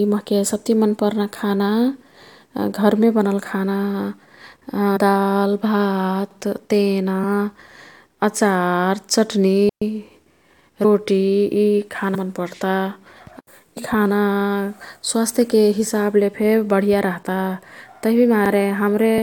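At 2.26 s the first overlapping-chunks stutter appears, and it recurs at 6.31, 10.36, 14.41 and 18.46 s. The speech was handled in 4-second chunks that each restart 50 ms early, so that stretch plays twice at every join, giving a regular click-stutter.

Compressed frames skipped first occurs at 4.96 s, then at 7.22, 10.84, 12.14 (just before "मन् पर्ता"), 13.76 and 19.17 s. Runs of whole 21.3 ms frames never reach the output, so the audio jumps ahead by roughly 40 to 150 ms.

From 9.69 to 9.82 s a digital wireless dropout mutes the signal for 124 ms. The receiver lost too much data and faded out quickly, leaving a clean hole of near silence with no noise burst on either side.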